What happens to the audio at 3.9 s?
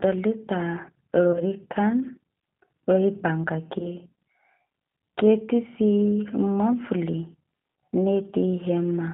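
Around 3.79 to 3.95 s there's a VoIP packet loss concealed by the speech codec. The dropout sounds like a single lost 10 ms frame. The decoder filled it by repeating its last pitch and filter settings at falling gain, so you hear a short smeared stretch that fades. Because each frame builds on the previous one, the distortion carries on for about 0.16 s in total, well past the gap itself.

All of this sits on top of the G.729 codec coding that runs through the whole clip. At 8 kbit/s, G.729A rebuilds the speech from a vocal tract model plus a few pulses per frame, and the line band is roughly 150 Hz to 3.7 kHz. That gives the audibly rough, slightly synthetic, band-limited character, and the concealment glitch shows up against it.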